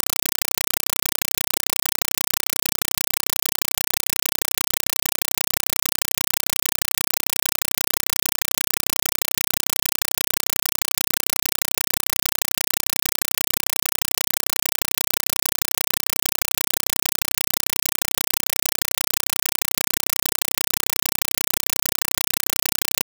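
A speech recording is replaced from start to finish by a compressed stream played as audio, heard as very loud, chattering static in place of speech. Each burst of noise lasts 5.33 ms and is followed by silent padding, repeating 31.25 times a second. That fits an AC-3 (Dolby Digital) stream passed over a digital link as ordinary samples instead of being decoded. The rigid frame rhythm separates it from steady hiss or random digital corruption.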